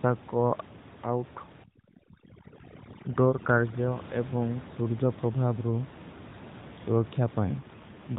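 Speech over an AMR narrowband mobile link, band-limited at 4 kHz with room noise about 17 dB below the voice, has an AMR rate drop from 7.6 s to 8.2 s, the end of the clip. The network appears to have pushed the codec down to a leaner mode, which fits a fall from 12.2 to about 5.9 kbps, so fewer bits describe each 20 ms frame. Without a gap or any change in bandwidth, the voice turns buzzier and more synthetic for that last half-second.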